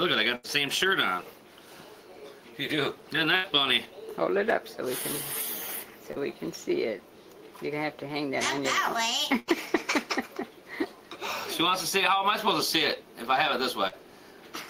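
A burst of packet loss at 0.35 to 0.47 s drops about 80 ms of audio. The receiver extends the last sound as a fading buzz or hiss, then jumps ahead. On a spectrogram this appears as smeared, decaying harmonics followed by a hard edge. The same happens at 3.36 to 3.47 s.

At 6.12 to 6.19 s, a short concealed packet loss removes 40 ms. The gap is patched by continuing the preceding pitch or noise and cross-fading back, which produces a brief wobble. In the waveform it looks like a slightly too-regular stretch rather than a silence.

Further bursts follow at 9.40 to 9.51 s, again losing about 80 ms, and at 13.88 to 13.95 s, losing 40 ms. Each shows a tapering envelope and blurred spectral texture before the audio resumes abruptly.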